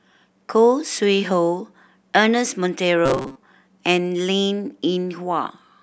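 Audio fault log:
3.06 to 3.37 s, robotic sound from repeated short buffers: the speech abruptly hardens into a stiff, metallic buzz pitched at 133 Hz, still loosely tracing the syllables before normal sound returns. This is likely caused by audio arriving too slowly, so the playback side kept looping the last fragment, about 7.5 ms long to match that buzz, for roughly 70% of this stretch while the real audio in between was dropped.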